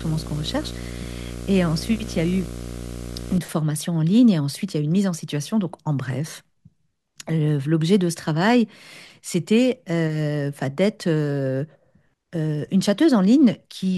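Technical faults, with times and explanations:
0.00–3.38 s, video or display buzz: a harsh 60 Hz buzz with a gritty hash riding above it sits under the speech, roughly 10 dB below it, then stops at 3.38 s. A screen or video cable is coupling its picture signal into the audio path. The picture refreshes 60 times a second, so the interference pulses at that field rate. Because each pulse is sharp-edged rather than smooth, it carries a spray of upper harmonics, which sounds like hash rather than a clean hum.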